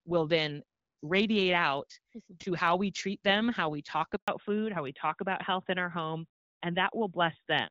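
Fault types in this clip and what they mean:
Handover gap: The call got passed between networks and no speech frames came through during the switch. Right after "them how we talk" the sound drops out at 4.16 s and stays silent for 120 ms, until about 4.28 s.
Fallback to narrowband: Once the new link picks up at 4.28 s, the call has lost its HD Voice and moved to an older narrowband codec. Nothing above 4 kHz survives from there to the end, so the sound turns duller and rougher. That's consistent with a step down to AMR-NB at around 12.2 kbit/s.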